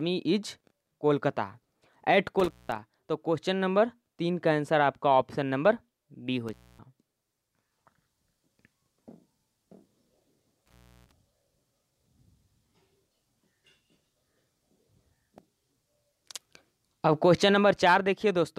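At 2.40 to 2.79 s, 6.48 to 6.79 s and 10.66 to 11.12 s the audio shows intermittent contact: a loose cable or plug briefly loses connection, so the signal drops out or breaks up, with crackle where the contact opens and closes. The open spans last about 189 ms, 258 ms and 313 ms, getting longer each time. A waveform shows sharp spikes at each edge around a collapsed section, and a spectrogram shows thin vertical broadband streaks bracketing a gap.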